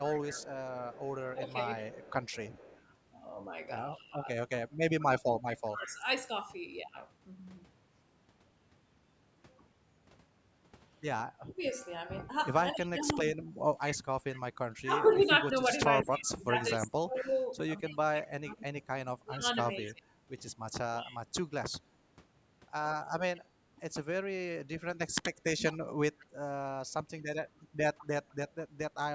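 From 0.05 to 5.92 s a faint copy of the speech trails it by 207 ms, about 20 dB below the main signal. This is an echo leak, likely from the far side's loudspeaker being picked up by its microphone and only partly removed by its echo canceller before being sent back.

Overlapping it, from 1.33 to 6.03 s, the speech dips in patches by up to about 15 dB, around a second in all. This is speech suppressed in double talk, likely because the canceller turned down both its own talker and the loudspeaker echo while both sides spoke at once.

From 11.41 to 21.29 s the same suppression returns, deeper at about 25 dB and affecting roughly five seconds altogether. This again is likely the canceller failing to separate the two sides.

The echo leak comes back from 12.81 to 28.35 s with the same 207 ms lag, now louder at about 15 dB below the speech. It is likely the same incomplete cancellation on the loudspeaker side.

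Within it, from 25.5 to 25.75 s, a brief dip of about 25 dB is one more instance of speech suppressed in double talk, likely from the same cause.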